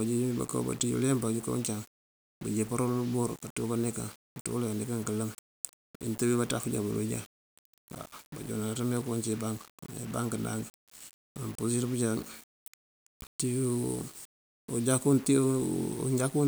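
Low bit depth without dither runs through this entire speech clip, from start to finish. The audio sounds as if it was rounded to about 6 bits, likely without any dither, so the rounding error tracks the signal rather than sitting as a steady hiss. The grit sits roughly 20 dB below the speech, turning quiet passages and decaying syllable ends rough and grainy, while the faintest moments sputter between steps or drop out to silence.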